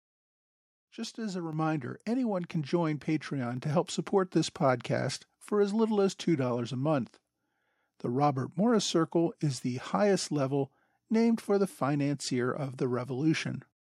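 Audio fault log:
1.53 s, microphone volume stepped up: the call software judged the microphone too quiet and raised the device's input volume in a single step, so the speech and the background noise behind it jump together by about 5 dB at that instant.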